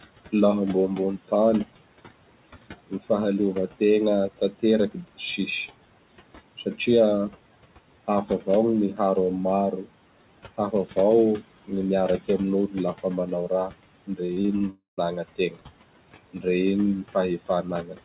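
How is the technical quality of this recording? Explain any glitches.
The recording has clear faults. There is suppressor processing throughout, speech losses in two stretches, and a break in the audio near 14 s. The sound is telephone-band, with nothing above 4 kHz, which fits a G.711 call path. Steady room noise sits about 17 dB below the speech.

Noise suppressor artifacts run through the whole clip. The suppressor judges which frequency bands hold steady noise and turns them down frame by frame, here by about 18 dB. The background drops away in pauses and creeps back under speech.

Speech cut by the noise suppressor happens from 2.87 to 5.38 s and again from 8.26 s to the end. The suppressor mistook quiet parts of the speech for noise and pulled them down with the background. In the first stretch roughly a third of a second is affected in total, with drops of about 19 dB. In the second the drops reach about 18 dB. 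Soft consonants and word endings sound swallowed or faint.

Repeated packet loss (robotic sound) occurs from 14.26 to 14.62 s. Audio went missing in several short bursts, about five, none longer than 20 ms. Each hole was patched by extending the previous sound. Patching covers about 28% of that span. Holes follow one another closely, so the sound turns choppy, with small pieces missing.

A longer break follows from 14.70 to 14.99 s. The last sound is stretched into a fading buzz or hiss for roughly a quarter second. Then comes about 130 ms of near-silence before audio resumes. The speech from that gap never returns, about 280 ms in all. This is likely a long network dropout, where nothing arrived and the receiver filled in until the stream came back.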